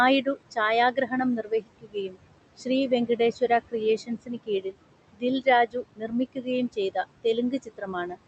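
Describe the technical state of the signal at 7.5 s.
At 7.5 s the signal falls inside the stretch of speech cut by the noise suppressor, from 5.13 to 8.17 s. The suppressor mistook quiet parts of the speech for noise and pulled them down by up to about 21 dB, roughly a second in total, leaving soft consonants and endings swallowed or faint. Noise suppressor artifacts run underneath as well: the suppressor lowers the bands it judges to be steady room noise by about 21 dB frame by frame, so the residual noise pumps against the speech, sinking between words and rising under them.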